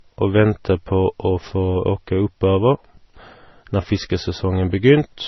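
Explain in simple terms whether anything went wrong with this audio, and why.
Something went wrong: the speech was likely squeezed by one lossy compression format and then squeezed again by another, a fault called transcoding between lossy codecs. The sound points to an MP3 copy that was later re-encoded as Vorbis. The second pass wastes effort preserving the first one's damage and adds its own, so two kinds of smeared, watery artefacts overlap for the whole clip. Nothing above 6 kHz survives, leaving the speech dull and muffled from start to finish.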